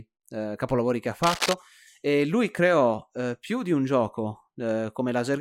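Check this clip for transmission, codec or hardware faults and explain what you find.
There's one hardware-type fault: cable scratch noise from 1.23 to 1.54 s, right after "eh capolavori che ha". A dense, ragged rustle sits nearly as loud as the speech, likely a worn connector or lead being moved so its contact resistance flickers rapidly.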